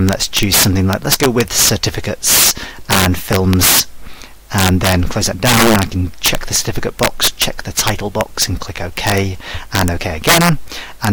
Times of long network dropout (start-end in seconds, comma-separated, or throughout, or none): none